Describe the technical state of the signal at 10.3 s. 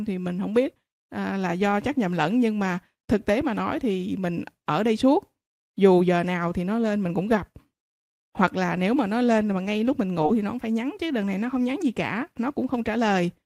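At 10.26 to 10.30 s, between "mà ngay lúc mình" and "thì nó cũng phải", short concealed packet loss replaces about 20 ms of speech with extrapolated sound, heard as a brief smear. A spectrogram shows the last sound continued there, and the waveform shows a cross-fade back into the real audio.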